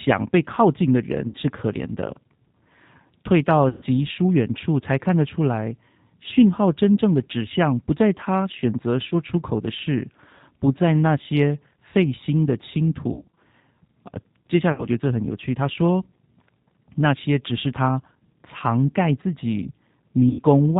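The whole clip runs through the G.729 codec at 8 kbit/s, and you can plainly hear it. Everything above 4 kHz is gone, and the speech has that slightly rough, synthetic edge from being rebuilt out of a filter, a pitch predictor and a handful of pulses. Then there's VoIP packet loss concealed by the speech codec at 1.28 to 1.35 s, 3.69 to 3.82 s, 9.09 to 9.13 s, 13.13 to 13.36 s, 14.72 to 14.87 s and 20.29 to 20.43 s. Each time, the decoder stretches the last sound it had into a fading buzz or coloured noise, and the speech stays weak for a moment after it comes back. The 3.69 s gap is the longest single one, about 120 ms. The 13.13 s patch is a scatter of short dropouts rather than one hole.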